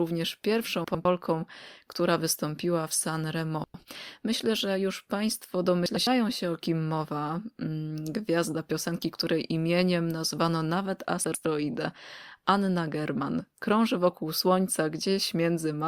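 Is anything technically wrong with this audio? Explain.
Yes. Frames out of order occur at 0.84–1.05 s, 3.64–3.85 s, 5.86–6.07 s (just before "się o kim mowa") and 11.24–11.45 s (after "której imieniem nazwano nawet"). In each, two adjacent blocks of about 0.1 s swap places, giving a garbled flutter. A waveform or spectrogram shows abrupt vertical discontinuities at those joins.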